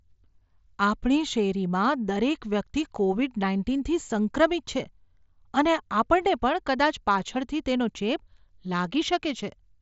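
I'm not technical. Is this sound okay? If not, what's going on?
Yes, no faults here: the speech comes through a Bluetooth headset link, which limits it to about 7.7 kHz and adds only a light graininess.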